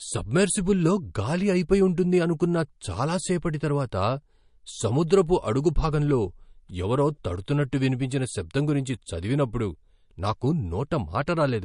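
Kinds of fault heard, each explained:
Low-bitrate audio saved at a high bitrate: throughout the speech, nothing is present above 10.6 kHz, a hard ceiling that a generous encoding would not impose. The likely cause is an earlier MP3 encoding at a low rate, something in the region of 42 kbit/s, later saved again as MP3 at around 256 kbit/s. The second pass makes the file larger but cannot restore the missing upper band or anything else the first encoder threw away.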